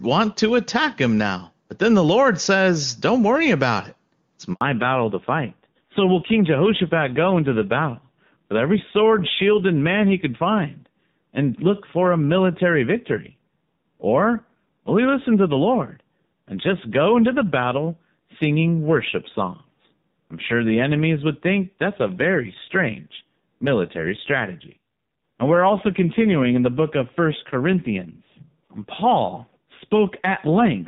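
At 4.53 s the speech cuts out for 80 ms in a handover gap. The call was passed from one network to another, and no speech frames came through while the link was switched. It is a clean silence rather than the buzzy or repeated fragments that packet-loss concealment leaves. It also ends on a change of sound: the new link does not sound like the old one, which tells it apart from a simple dropout on one connection.

From 4.61 s to the end there is a fallback to narrowband. Before the gap the clear wideband sound fits AMR-WB at about 23.85 kbit/s. After it, the call runs on an older narrowband codec and nothing above 4 kHz gets through, so the speech turns duller. It also turns rougher, which fits AMR-NB at a low rate near 5.9 kbit/s. That roughness is what separates it from a plain low-pass filter, which would only dull the sound.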